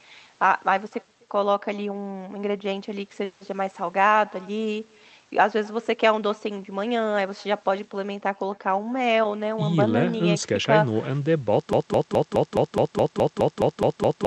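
Speech with echo with no canceller running throughout: a faint, thin copy about 28 dB below the talker trails every phrase by roughly 300 ms, as the far end's loudspeaker leaks back into its microphone and returns the voice down the line. From 11.73 s to the end the audio locks into a broken-record loop, a single 210 ms fragment repeating 12 times back to back. The likely cause is a stalled stream resending its last held piece while the audio that should have played is lost.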